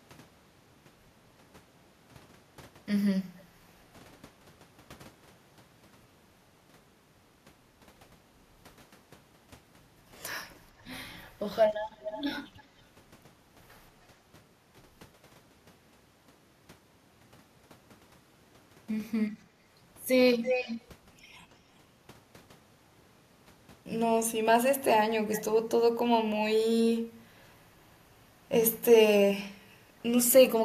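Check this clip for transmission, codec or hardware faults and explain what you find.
Two faults are audible: echo leak and background gated by the echo canceller.

Echo leak at 3.37, 10.78, 12.0, 12.57, 20.43 and 25.32 s: likely an echo canceller missing loudspeaker pickup, returning speech about 0.3 s late as a faint-to-strong copy (about -40 to -5 dB).

Background gated by the echo canceller at 27.01–27.16 s: microphone suppression clamps down, so room sound dips about 12 dB for roughly a tenth of a second.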